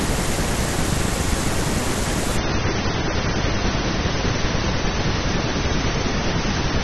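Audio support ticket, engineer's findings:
Speech loses treble abruptly at 2.37 s and stays dull to the end of the clip at 6.84 s; nothing above about 6.3 kHz, no gap at the switch. Adaptive stream at a lower bitrate: player dropped to a much lower-rate rendition. The sound points to AAC going from roughly 96 to 24 kbit/s, with low-pass and artefacts rising.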